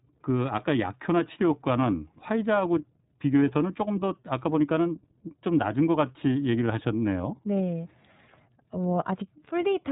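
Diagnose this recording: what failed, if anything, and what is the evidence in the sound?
The codec stage is the culprit: the whole clip went through iLBC. Nothing above about 3.9 kHz survives, and the speech sounds rough and slightly synthetic, which fits 30 ms frames each coded on their own at a low rate, perhaps around 13 kbps.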